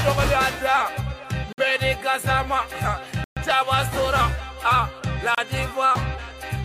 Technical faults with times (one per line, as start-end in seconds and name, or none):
1.53-1.58 Bluetooth stall
3.24-3.37 Bluetooth stall
5.35-5.38 Bluetooth stall